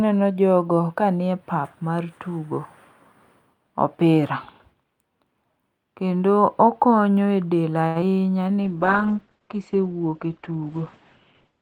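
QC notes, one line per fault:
7.87–7.97 s, short stall from a late packet: a packet arrived late and the jitter buffer ran dry, so the receiver held the last sound for 80 ms until it came, adding 80 ms of delay. Nothing is lost, but the sound hangs unnaturally long.
8.01–8.04 s, short concealed packet loss: about 20 ms of audio missed the decoder, and the receiver papered over the gap by extending the preceding sound before blending back, while delay eased by roughly 15 ms. It comes across as a brief smear or wobble.
8.64 s to the end, call bitrate drop: the bandwidth estimate fell and the encoder was pushed from 64 kbps down to 11 kbps, its audio bandwidth narrowing from 20 kHz to 8 kHz. The sound turns coarse and muffled, top end gone, for the final 3 s.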